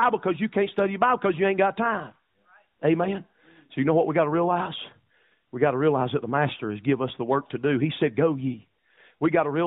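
The speech carries no audible technical faults.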